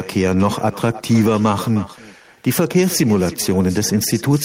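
Speech runs through all 4.4 seconds with an echo with no canceller: each phrase is shadowed roughly a third of a second later by a copy about 19 dB below it. The far end's loudspeaker fed its microphone and nothing removed that path, so the voice returned after the network round trip. A spectrogram shows each harmonic pattern repeated at lower intensity about 0.3 s to the right, and the waveform shows a smaller trailing envelope after each burst.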